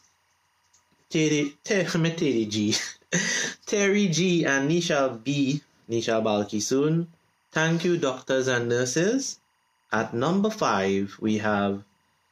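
Throughout the clip, timecode bleed sits faintly under the sound, roughly 45 dB down. Linear timecode from an adjacent line has leaked in, its square wave flipping between about 1 and 2 kHz, producing a steady chirping warble whose rhythm fits 23.976 fps code.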